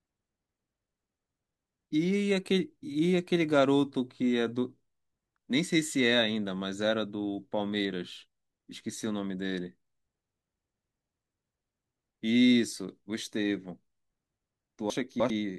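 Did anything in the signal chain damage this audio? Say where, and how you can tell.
Yes: a jumbled moment from 14.90 to 15.30 s is chunks out of order, one 100 ms buffer chunk played three chunks late.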